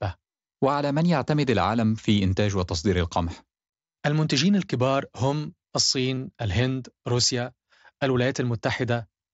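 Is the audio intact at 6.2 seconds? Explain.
No. Concealed Bluetooth headset packet loss hits at 6.15 to 6.17 s, just before 6.2 s. About 22.5 ms of headset audio never reached the phone, and the receiver bridged the gap by repeating the closest-matching piece of the waveform it had just received. Because this covers a short run rather than a single packet, it comes through as a brief buzzy, level-held tone with a slight warble where the real signal resumes over the wideband mSBC link.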